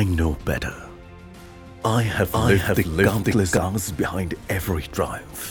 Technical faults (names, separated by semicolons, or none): doubled audio track